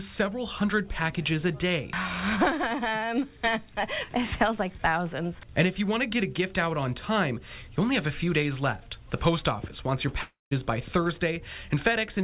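From 10.22 to 10.53 s the sound smears into a fading buzz, then about 160 ms of silence, and resumes with 300 ms of material missing. This is likely a long network dropout, the receiver stretching its last audio to cover the gap.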